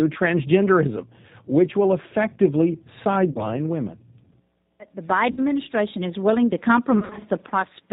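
Throughout, the speech carries the rough, slightly synthetic texture of the G.729 codec, plainly audible here at 8 kbit/s. The decoder rebuilds each 10 ms frame from a vocal tract filter, a pitch predictor and a few pulses, so fine detail is lost. On a spectrogram, nothing appears above 4 kHz, and harmonics look smeared rather than crisp.

At 3.32 to 3.48 s comes the first VoIP packet loss concealed by the speech codec. About 30 ms of audio is missing, which fits three lost frames. The decoder stretches its last pitch and filter into a short buzzy tone or coloured noise that sags in level. On a waveform this looks like a repetitive, shrinking stretch, and the speech after it recovers weakly. At 5.31 to 5.41 s a longer gap of about 60 ms does the same. From 6.99 to 7.25 s the losses are scattered over roughly 220 ms, about 140 ms in total with the longest run 50 ms. This gives a stuttering patch. 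A spectrogram shows repeated frozen harmonic bands between fainter, distorted speech.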